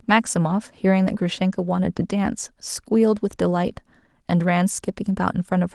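No technical faults can be heard in this speech recording. Nothing at any moment stands out from the rest of the audio.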